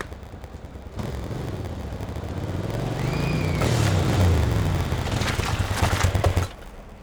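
From start to end, a steady buzz at about 86 Hz sits under the sound. This is a block size mismatch (padded). Each block is written short and topped up with silence. The buzz rate fits 512-sample reads. The audio plays slower, at 0.938 times speed, with pitch nearly unchanged.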